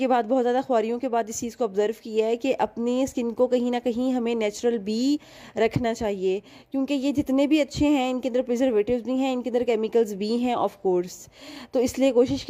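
No technical faults can be heard anywhere in the audio.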